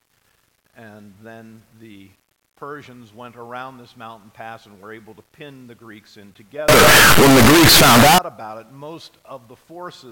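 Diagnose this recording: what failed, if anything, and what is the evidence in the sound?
Between 6.69 and 8.18 s the sound turns into a wall of harsh, very loud distortion, with quiet moments as loud as the rest. That's sample-format conversion, likely signed and unsigned mixed up on the 8-bit samples. The top bit flips, so every zero crossing jumps across the range.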